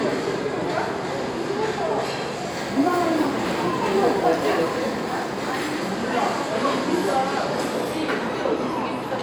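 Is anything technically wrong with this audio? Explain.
Yes. From 2.50 to 5.79 s there is crude rate conversion: samples are dropped in a repeating pattern that fits a 48 kHz to 44.1 kHz change. This leaves a gritty, inharmonic fizz roughly 30 dB below the sound.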